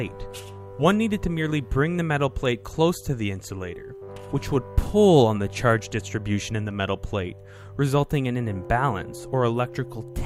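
No technical faults can be heard anywhere in the clip.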